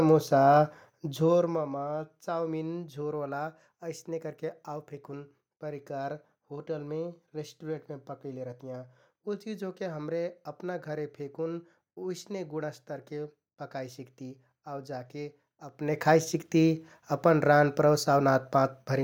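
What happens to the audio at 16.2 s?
At 16.2 s the speech carries on intact, with no dropout, distortion or sudden jump in level.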